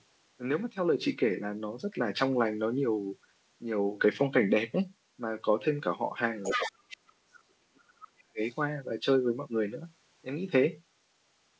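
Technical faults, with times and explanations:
6.43–6.72 s, 6.89–6.97 s, 8.03–8.08 s and 8.45–8.49 s, other side's voice leaking through: brief scraps of a second voice show up. The first is loud, only about 5 dB under the talker, and the rest fade to about 20 dB and then about 40 dB down. That's likely loudspeaker echo the canceller didn't fully remove.
6.54–8.41 s, speech suppressed in double talk: the talker's level sags and breaks up for roughly two seconds, dropping around 40 dB at its worst. Likely the echo canceller couldn't separate the two sides and turned both down.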